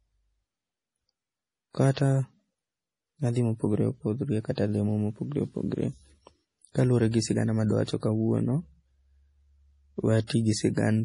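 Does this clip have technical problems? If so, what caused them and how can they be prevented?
Yes, two connected problems. Throughout the speech, everything above about 10.6 kHz is missing, and the sound has that watery, swirly quality where quiet detail flickers in and out. This is heavy damage, likely from MP3 compression at a low bitrate, which fits a 32 kbps encode. Starved of bits, the encoder chopped off the treble and kept dropping weaker frequency lines from one frame to the next. To prevent it, encode at a much higher bitrate or keep a lossless master.

The second problem is pre-echo, a smear of hiss roughly 30 to 37 ms long that arrives just ahead of sharp onsets. It shows up at 1.94 s, at 7.11 s right before "sigana ma adwa", at 7.84 s right after "sigana ma adwa", and at 10.27 s. Each time, a sudden attack landed late in a transform block, and the codec spread its noise, sized for the loud part, back into the quiet moment before it. 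Here too, a higher bitrate, or an encoder that switches to short blocks on attacks, would prevent it.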